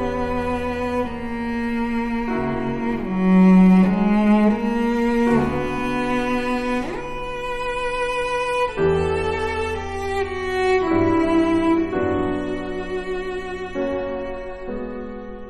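Adaptive stream at a lower bitrate from 7.59 s to 15.49 s: quality drops abruptly with no gap, consistent with the player switching to a much leaner MP3 rendition, around 32 kbit/s. Treble vanishes above 12.2 kHz and compression artefacts thicken.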